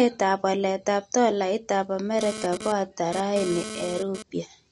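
From the start the speech has a watery, swirly quality with chirpy sibilants, and nothing survives above 11.2 kHz. That's likely MP3 compression at a low bitrate, around 48 kbps judging by the damage, with weak frequency lines dropping in and out frame to frame.

Right after "waletap tolaitap", at 2.19 s, a hard, raspy GSM phone buzz cuts in at 217 Hz, full of harmonics and about 10 dB below the speech. It stutters on and off as a nearby phone transfers data, then stops at 4.23 s.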